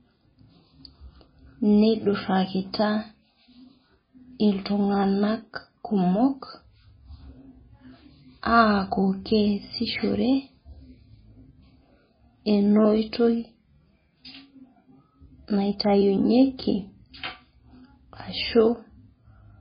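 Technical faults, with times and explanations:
Throughout, MP3 compression: the speech has nothing above 5 kHz, so it comes across dull and boxy, and heavy swirly, watery artefacts ride on it the whole way, with s sounds turning chirpy and onsets smeared. That's likely a starved MP3 encoder, which fits a bitrate somewhere around 16 kbps. Short on bits, it chops the top end at a fixed point and drops quieter frequency lines, which flicker in and out from frame to frame.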